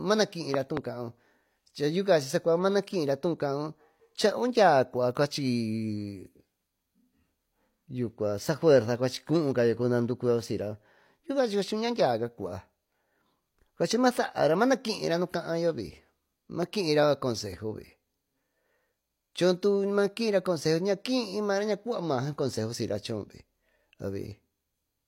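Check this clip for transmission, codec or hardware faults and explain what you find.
Two kinds of fault are present: a re-encoded low-bitrate file throughout, and loud pops at two points.

Throughout, this is likely low-bitrate audio saved at a high bitrate. Nothing exists above 16.3 kHz, and the first encoding's compression artefacts persist despite the large file size.

From 0.54 to 0.79 s, two loud pops sit about 15 dB above the speech, likely voltage spikes from a plug, switch or static. At 16.63 s, one pop peaks about 10 dB above. The speech continues underneath both.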